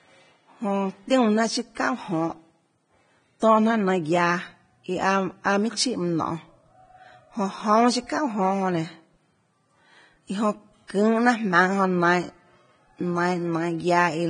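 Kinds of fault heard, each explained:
Vorbis compression: The speech sounds hissy and grainy throughout, with roughened tones, softened consonant attacks, and nothing above about 9.7 kHz. This is likely heavy Vorbis coding at a low bitrate, consistent with roughly 22 kbps. The encoder keeps a smooth outline of the spectrum but quantises the treble so coarsely that fine detail turns into noise of similar energy, and it cuts the top band off entirely to save bits.
pre-echo: Between 10.87 and 10.90 s, a short hiss runs ahead of a sharp onset for about 23 ms, and the attack itself sounds smeared rather than crisp. The transform codec spreads its quantisation noise across a whole block. Because this attack falls late in its block, noise sized for the loud onset also fills the quiet stretch just before it, where nothing masks it.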